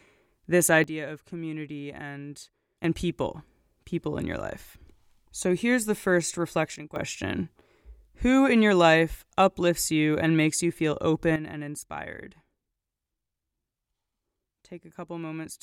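Speech with sudden gain jumps: the level drops about 12 dB from 0.84 to 2.84 s, before "and people people in", about 12 dB from 6.76 to 6.96 s, after "so here's the first", and about 11 dB from 11.36 s to the end, after "and makes you feel". Background noise steps instantly with the sound, with no ramp like a compressor or gate, so it is likely an unramped digital gain change.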